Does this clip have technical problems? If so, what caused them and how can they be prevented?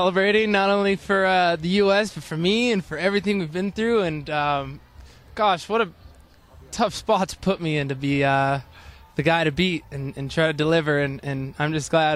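Yes. From the start to about 8.27 s there's crude rate conversion: a faint gritty fizz, well below the sound, that trails loud and bright passages. Linear interpolation without filtering, likely from 44.1 kHz to 48 kHz, leaves inharmonic aliasing tones. Use a proper band-limited resampler instead.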